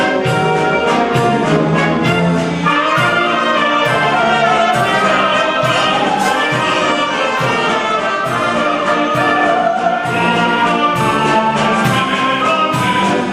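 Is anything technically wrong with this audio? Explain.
Yes. Throughout, the audio is dull and gurgling, likely from MP2 compression at a bitrate around 80 kbps, which starves upper sub-bands. A spectrogram shows upper bands flickering on and off.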